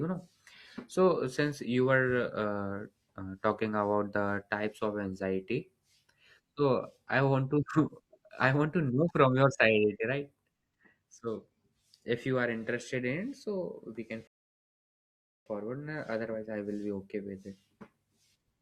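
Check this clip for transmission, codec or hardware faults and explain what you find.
There's one fault here, a rebuffering stall. At 14.27 s the speech drops to dead silence and picks back up at 15.46 s, adding about 1.19 s to the clip. What's happening is the player burned through its downloaded audio and had to sit and wait for more to arrive. When playback restarts it carries on from exactly the point it stopped, so nothing is skipped. It just sounds like a sudden, unnatural pause.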